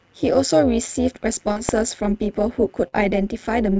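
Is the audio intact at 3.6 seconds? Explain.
No. Overlap-add ripple runs throughout: frames were recombined with uneven overlap gain, so the level swings about 11 dB around 150 times a second, giving a metallic buzz with extra tones around each note.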